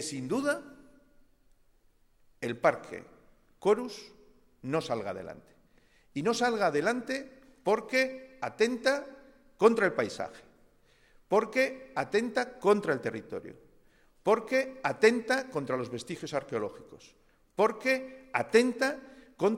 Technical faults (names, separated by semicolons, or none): none